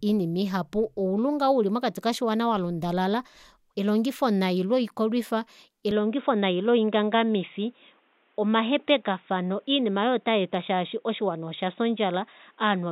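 At 5.91 s the speech abruptly loses its top end and stays that way to the end, with nothing above 3.8 kHz, so it turns dull and boxy. There is no gap at the changeover and the level stays about the same, but a faint new background noise appears, roughly 40 dB below the speech. This is most likely the input switched to a poorer device, such as another microphone or a headset's call profile.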